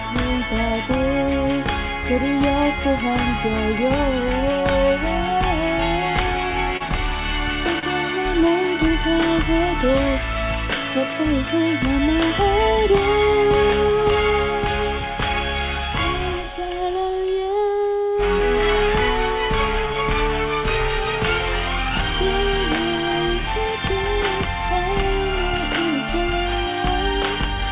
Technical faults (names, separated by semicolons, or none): short concealed packet loss; short stall from a late packet